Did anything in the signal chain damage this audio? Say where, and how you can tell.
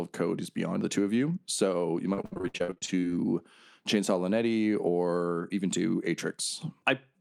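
Yes, network side: repeated packet loss (robotic sound), 2.13 to 3.04 s. Nearly half that stretch is gaps up to 64 ms, patched over by extending earlier sound.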